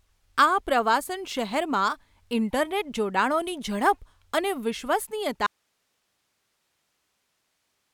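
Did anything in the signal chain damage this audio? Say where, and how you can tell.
Yes. At 5.47 s the speech cuts off abruptly and never returns, leaving only hiss roughly 50 dB down: an audio dropout to a faint residue, likely a lost upstream connection while later stages stayed live. The spectrogram shows speech harmonics ending sharply into flat broadband noise.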